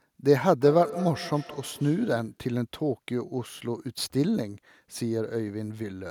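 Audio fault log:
0.61–2.45 s: feedback echo between two devices. The speech comes back at a steady interval of roughly 150 ms, each pass thinner and more ringing, the loudest repeat about 11 dB below the direct sound. A second device in the room replays this call and the first device's microphone picks the sound up again, out of reach of the first device's echo canceller. Room reverberation would smear smoothly; here the repeats are discrete, evenly spaced, and increasingly coloured.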